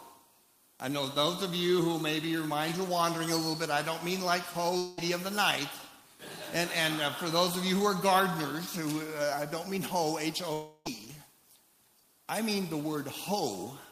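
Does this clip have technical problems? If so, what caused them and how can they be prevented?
Yes. At 4.77–4.99 s and 10.53–10.87 s the sound smears into a fading buzz for 0.2 s and 0.32 s, then resumes with material missing, likely a long network dropout concealed by extending the last audio. Unlike a brief packet loss, each gap lasts tenths of a second. Larger jitter buffers and redundant packets prevent it.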